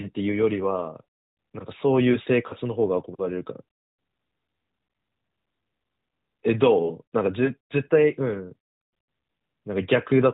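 At 2.48 to 2.55 s and again at 7.46 to 7.54 s, the speech has lost AMR speech frames, a single 20 ms frame each time. The decoder bridges the gap by reusing the last good pitch and vocal tract settings at lower gain, heard as a short dip or warble. The narrowband AMR coding underneath is audible as a cut-off at 4 kHz with light coding roughness, which fits the 12.2 kbps mode.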